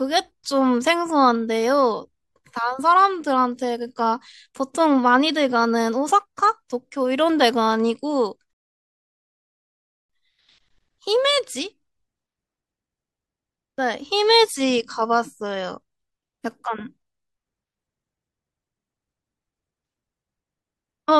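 A recording of speech that stops dead at 8.53 s, falls into silence, and picks up again at 10.10 s exactly where it left off, with nothing skipped or repeated. That gap of about 1.56 s is a rebuffering stall: playback drained its store of downloaded audio, so the player paused until enough new data arrived to continue. The speech itself is intact, but the delay is inserted into its timing.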